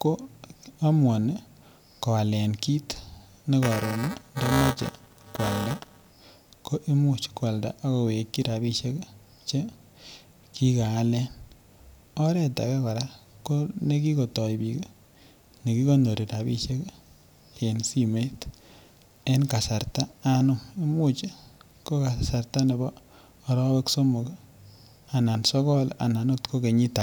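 From 3.63 to 6.10 s, before "ko imuch kwalda ak", buffer tearing splices stale audio in, causing a 345 Hz robotic rattle; the spectrogram shows evenly spaced vertical streaks.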